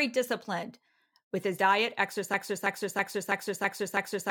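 At 2.34 s the speech locks into a broken-record loop: a fragment of about 0.33 s plays back to back, identical each time, six times over until the clip runs out. It sounds like a stuck stutter, the same tiny slice hammering away with no progress. This is likely a stalled player, encoder or stream that kept resending the last chunk it had buffered, so whatever should have followed is simply gone.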